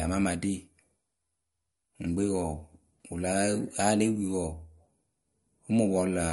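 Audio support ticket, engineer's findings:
Watery, swirly texture throughout, with metallic chirps on s sounds and smeared consonant onsets. Nothing above 11.2 kHz. Likely MP3 compression at a starved bitrate, consistent with about 48 kbps. The encoder cuts the top band and drops weak frequency lines frame to frame. Spectrogram: flat hard ceiling at 11.2 kHz, with flickering holes and speckle below it. Waveform: attacks soft-edged rather than crisp.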